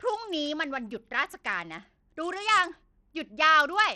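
Bluetooth SBC compression runs through the whole speech clip, from start to finish. The likely cause is an SBC link squeezed to a small bit pool, and the damage fits a rate near 80 kbps. The encoder splits the signal into a few wide bands and, lacking a hearing model, starves the weakest upper bands first. The treble thins out and flickers, and a gritty, aliased grain clings to the speech throughout.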